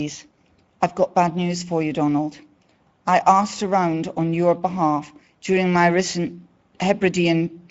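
Throughout the speech, the Speex codec is starving the excitation of bits, consistent with a middle quality setting around 17 kbps. The voice comes out audibly hoarse and noisy, and nothing is left above 7.7 kHz.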